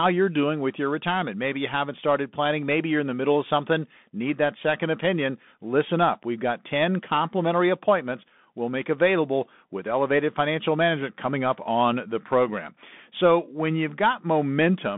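From start to finish the speech carries the sound of a Bluetooth CVSD headset codec. The line passes roughly 150 Hz to 3.6 kHz, with nothing above 3.8 kHz, which fits a 64 kbps CVSD link. Because the codec tracks the waveform with one up-or-down bit per sample and an adapting step, fast loud high-frequency content outruns it. The damage is plainly audible: s sounds turn scratchy and a granular hiss sits beneath the speech.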